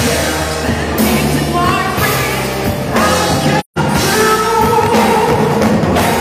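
From 3.59 to 3.78 s there is AAC frame loss with muting: the decoder zeroed the missing spectra, so the sound fades into a soft-edged hole of about 0.17 s, which fits a run of four lost frames. Waveform and spectrogram show a tapered blank gap.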